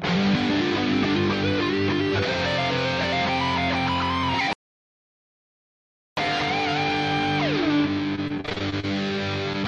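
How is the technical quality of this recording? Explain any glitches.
The recording has two clear glitches. From 4.53 to 6.17 s the sound stops dead for about 1.6 s, then resumes; this playback stall likely came from the player starving or blocking, unlike dropouts, which are brief. From 8.16 to 8.85 s, repeated packet loss gives a choppy, robotic stretch of ten short holes, none longer than 38 ms, patched by stretching earlier sound, rather than one long silence.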